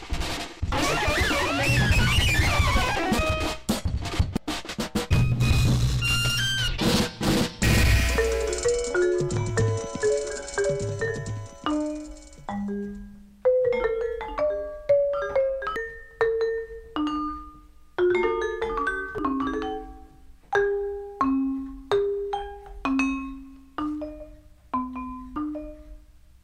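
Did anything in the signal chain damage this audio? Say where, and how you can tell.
Yes: damaged data in a compressed stream, at 0.72–0.75, 4.37–4.40, 15.76–15.79, 19.18–19.22 and 25.36–25.39 s. Each brief glitch marks corrupted frames that the decoder misreads before it resynchronises on the next valid header.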